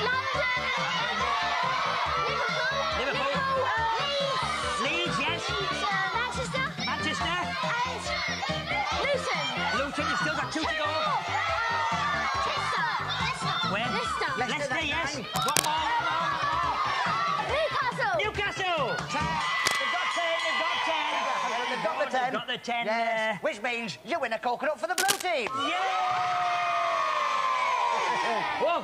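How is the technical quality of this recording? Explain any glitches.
The recording has three short glitches of the same kind: cable scratch noise. They occur at 15.34 to 15.66 s, 19.59 to 19.77 s and 24.98 to 25.22 s. Each is a brief burst of rough scratching or rustling laid over the sound, about as loud as the sound itself. The likely cause is a worn cable, connector or control being moved. Its contact resistance jumps about rapidly, adding dense, uneven noise until the movement stops.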